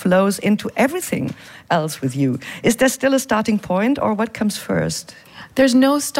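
No faults detected anywhere in the recording.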